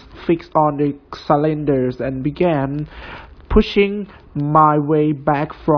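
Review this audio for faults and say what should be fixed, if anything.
No faults found in the speech; nothing to fix.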